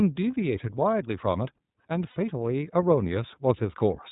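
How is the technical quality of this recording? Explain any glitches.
The recording has two problems: narrowband coding through the whole clip and a short dropout just after the two-second mark.

Throughout, the speech has passed through the iLBC codec, a narrowband VoIP coder that treats each frame on its own. Everything above 4 kHz is gone, so the speech sounds muffled and boxed-in. The compression damage is plainly audible as a rough, slightly synthetic texture. The coarseness fits the 30 ms frame mode, at roughly 13 kbps.

From 2.10 to 2.17 s, about 60 ms of audio is missing, consistent with lost iLBC frames, most likely two consecutive packets. The decoder covers the gap by repeating its last pitch cycle mixed with noise. This sounds like a briefly held, faintly buzzy vowel. Because each frame decodes independently, the speech returns cleanly as soon as packets arrive again.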